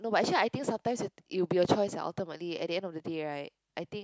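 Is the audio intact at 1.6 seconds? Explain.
Yes, at 1.6 seconds the speech runs on without any dropout, click, distortion or other fault.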